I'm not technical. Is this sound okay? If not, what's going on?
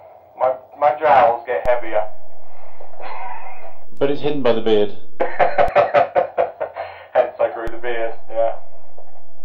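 No. A DC step occurs: the waveform's zero line jumps at 1.66 s, returns at 5.68 s, then jumps again at 7.68 s until the end. Each jump makes a low thump.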